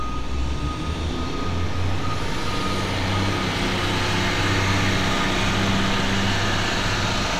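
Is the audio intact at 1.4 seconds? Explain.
Yes, the audio is intact at 1.4 seconds, with no dropout, click, distortion or other fault at that moment.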